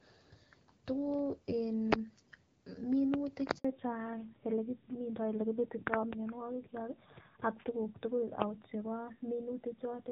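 At 3.59 s the call is passed from one network to another, and for the 60 ms until 3.65 s no speech frames arrive across the handover gap. The link carries nothing while the switch completes, so the speech dies away and the sound goes dead for that short stretch. Whatever was said in that moment is gone, leaving a brief hole before the new connection picks up.

From 3.65 s to the end, the call falls back to narrowband. Before the switch, the HD Voice path had a clear, wideband character consistent with AMR-WB at around 12.65 kbit/s. After it, the new link codes only the telephone band, and the rough, buzzy texture fits AMR-NB at roughly 7.4 kbit/s. Nothing above 4 kHz survives, so sibilants and the airy top of the speech vanish, leaving the rest of the clip duller, muffled and grainier.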